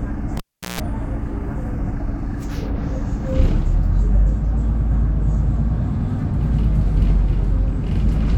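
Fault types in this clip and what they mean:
Cable pulled and plugged in: a live cable is pulled from its socket and pushed back in. At 0.37 s a pop cuts the sound to near silence for 380 ms, which includes 150 ms of 60 Hz mains buzz, until a second pop restores the audio at 0.80 s.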